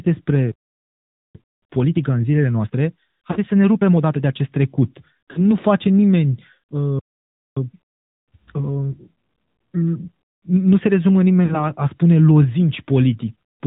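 AMR narrowband mobile codec damage runs through the whole speech clip: nothing above 4 kHz survives, and the voice has a plainly audible buzzy, synthetic edge, which fits a mid-rate mode around 10 kbps, where few pulses per subframe drive the vocal tract model. Time-compressed catch-up from 1.35 to 4.35 s hurries the speech to 1.25 times normal speed at unchanged pitch, as the player cuts and cross-fades small pieces to work off a backlog after a stall. Lost AMR speech frames hit at 3.32 to 3.39 s, 5.32 to 5.40 s and 11.46 to 11.71 s, each costing about 40 ms; the decoder reuses the last good pitch and vocal tract settings at falling gain, so at each spot the sound is drawn out and fades before the voice recovers, weak or rough for a moment.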